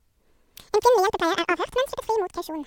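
From start to end, the speech plays at exactly twice its proper speed and a full octave high, 12 semitones. This is audio read two samples at a time: the reader treated each pair of samples as one frame, as if the stream were stereo or twice as wide, and so consumed it at double rate. Unlike a pitch shift or a time-stretch, speed and pitch rise together in a fixed 2:1 ratio.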